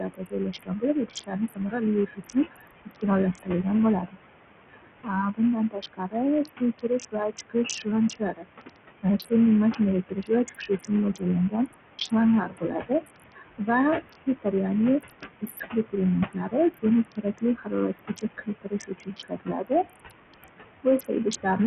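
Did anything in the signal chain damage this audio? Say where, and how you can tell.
Yes. At the call-processing stage, noise suppressor artifacts run through the whole speech clip. The room noise sits about 10 dB below the speech. Between phrases it is pulled down by about 19 dB, then rises again under the speech, so the floor pumps in step with the talker. The suppressor decides frame by frame which bands count as steady noise and attenuates them.

At the codec stage, the band-limiting and grit point to Bluetooth SBC compression, likely as the cause. Nothing is present above 14.2 kHz, the upper treble flickers in and out, and a coarse, gritty layer rides on the speech. The damage is heavy, which fits a small bit pool around 48 kbps. With that budget the weak top sub-bands get few or no bits, and the remaining bands are quantised roughly, with no hearing model to hide the error.

Also at the call-processing stage, speech cut by the noise suppressor appears from 0.0 to 4.17 s and again from 4.72 to 21.59 s. 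In the first span about two seconds of speech are affected, with dips of up to about 21 dB. In the second span about five seconds are affected, with dips reaching about 22 dB. Quiet consonants and word endings sound swallowed. The suppressor misread those low-level speech frames as noise and attenuated them together with the background.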